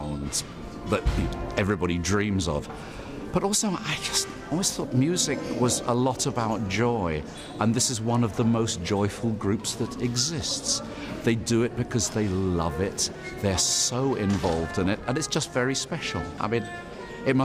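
Nothing in the audio stands out as a technical fault, so there's nothing to flag here.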